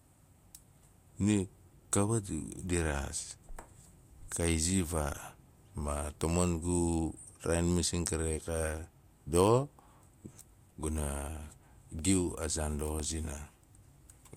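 Speech, with periodic USB or driver dropouts from 11.99 to 14.01 s: about three brief losses, evenly spaced at 1.0 s, each roughly a millisecond long and filled with silence. They sound like regular ticks riding on the voice, the signature of something briefly stalling the audio driver or bus on a fixed schedule. On a waveform each shows as a tiny flat, silent gap. On a spectrogram each appears as a thin vertical broadband stripe.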